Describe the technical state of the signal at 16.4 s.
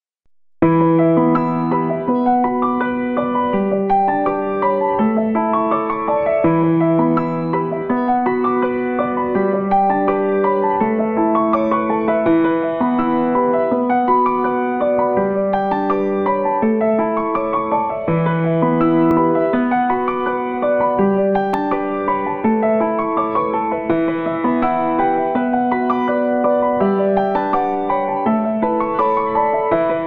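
The signal at 16.4 s is intact, with no audible fault at that moment.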